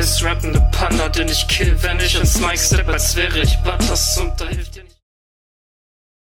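Nothing stood out on listening; the level simply eases away in a smooth fade-out that begins around 4 s and has died away by 5.04 s.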